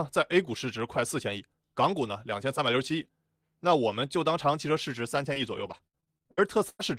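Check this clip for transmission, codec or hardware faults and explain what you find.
One transmission fault is present, in the closing stretch of the speech. From 5.33 to 6.81 s there is repeated packet loss (robotic sound): ten gaps, the longest 99 ms, each patched by extending the preceding sound. About a quarter of the span is concealed, making the speech choppy. A spectrogram shows smeared, repeated frames between breaks, and the waveform shows abrupt envelope discontinuities.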